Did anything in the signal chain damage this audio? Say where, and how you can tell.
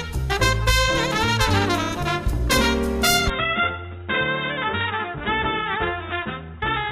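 Yes. From 3.3 s to the end the sound abruptly turns duller and slightly quieter, with nothing above 3.8 kHz and a new, faint noise floor. There is no gap at the change, which points to a likely input switched to a poorer device at the driver level.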